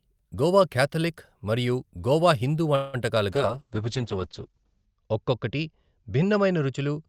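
A call audio freeze at 2.75 to 2.96 s stretches the last sound into a fading buzz for about 180 ms, likely from delayed packets draining the jitter buffer, before the speech resumes later with nothing lost. From 3.32 s to the end, a call bitrate drop makes the speech rough and muffled, with the top cut from 20 kHz to 8 kHz, which fits an encoder forced down to around 8 kbps.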